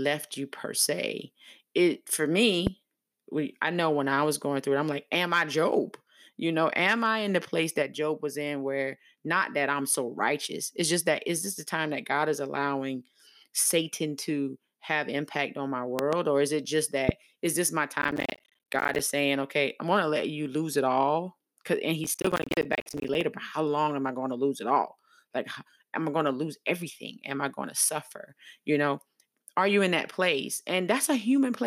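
Loud pops at 2.67 s, a double pop at 15.99 to 16.15 s, and another at 17.09 s, peaking about 15 to 20 dB above the speech, likely from electrical pulses. Each shows as a tall waveform spike and a full-height vertical line on a spectrogram. Processor overload crackle follows at 18.02 to 18.99 s and 22.04 to 23.21 s. Missed deadlines drop short silent gaps, fitting buffers of around 10 ms, into the audio, heard as gritty tearing. These appear as dense dropouts with broadband vertical streaks.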